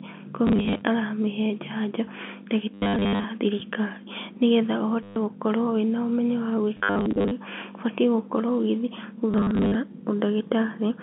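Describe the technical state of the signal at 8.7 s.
At 8.7 s the signal is intact, with the speech coming through cleanly within the narrow band of the telephone line.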